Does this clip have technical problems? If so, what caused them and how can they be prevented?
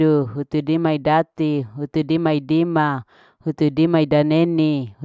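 No, nothing in this speech recording stood out as a technical problem on listening, so there is nothing here that needs preventing.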